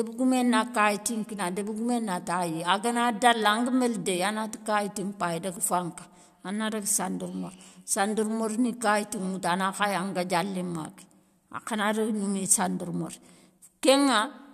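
Listening to the speech in this recording, nothing stood out as a technical problem.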